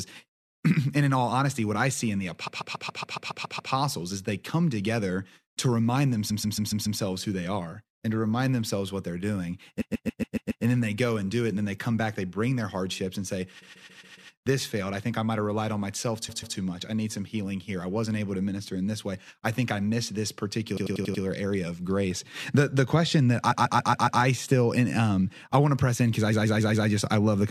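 Repeated frames stutter the speech at 2.46, 6.30, 9.80 (after "themselves what they're doing"), 13.61, 16.28, 20.76 (between "think I missed this" and "area of grace"), 23.50 and 26.31 s (after "um I want to"). Each time, a 139 ms block of compressed frames replays, 93 ms at 20.76 s, adding up to 5.48 s.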